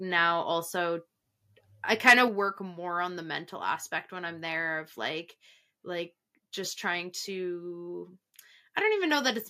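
From 2.07 to 2.13 s the loudest syllable turns harsh and crackly: microphone overload, with peaks likely driven about 7 dB past the converter's limit, flattening roughly a tenth of the samples. At 2.28 s the voice and background suddenly drop about 4 dB together, a microphone volume step-down, likely the call software cutting input gain after that clipped peak.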